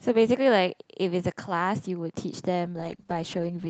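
At 2.67 s the speech abruptly turns rough and muffled, and it stays that way through the end. That's a call bitrate drop: the codec was squeezed into far fewer bits, which sounds like a fall from about 48 kbps to around 9 kbps, so the coding gets coarse and the highs vanish.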